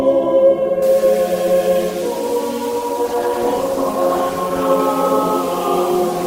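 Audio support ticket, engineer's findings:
Low bit depth without dither, 0.82 s to the end: gritty, grainy distortion riding on the music, worst on quiet passages, with a noise floor only about 20 dB down. Likely cause is truncation to very few bits, around 5, with no dither.

Call bitrate drop, 2.73 to 4.85 s: music turns rough and watery, top end dulled, for about 2.1 s before clearing. Sounds like the Opus encoder was pushed from roughly 32 kbps down to about 14 kbps, coding coarser and trimming highs.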